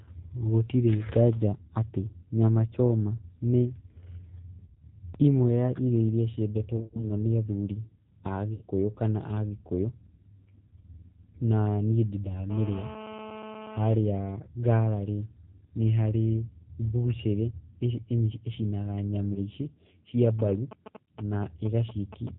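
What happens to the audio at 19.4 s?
From about 19.33 to 19.42 s there is VoIP packet loss concealed by the speech codec. Roughly 30 ms of audio never arrived, which fits three lost 10 ms frames. The decoder filled the gap by extending its last pitch and filter settings at falling gain, so the sound smears into a short buzzy tone or coloured noise that fades rather than dropping to silence or clicking, as a plain dropout would. Because each frame builds on the one before, the audio stays weak or distorted for a moment after the packets resume.

Throughout this stretch, as across the whole clip, the G.729 codec at 8 kbit/s also applies. It rebuilds the speech from a vocal tract filter and sparse pulses and passes nothing above 4 kHz. The result sounds band-limited, rough and faintly synthetic, a steady coloration distinct from the brief concealment event.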